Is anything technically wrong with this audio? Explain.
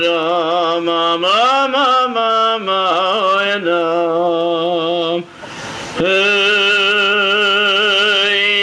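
Yes. Gain pumping runs through the whole clip, with the level swinging by around 20 dB. Loud and soft parts sit squashed together. The likely cause is input gain set far too high, with a fast limiter or compressor clamping down on every peak and then releasing.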